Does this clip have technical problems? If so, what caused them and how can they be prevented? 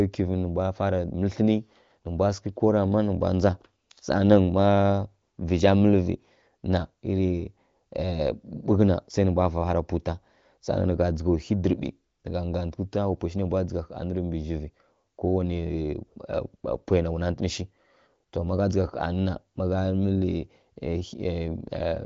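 No, this speech clip has no technical problems: it comes through an AMR wideband (HD Voice) codec path at 18.25 kbit/s, a rate high enough to keep speech clear, and its audio stops at 7.5 kHz, as expected for that wideband channel.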